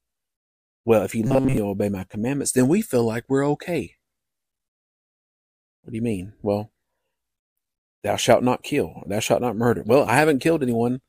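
Speech clip, and from 1.27 to 1.57 s it goes robotic: a rigid metallic buzz at 134 Hz, with most of that stretch being repeats. That's likely from repeated short buffers, each about 7.5 ms, looped while the real audio gets skipped.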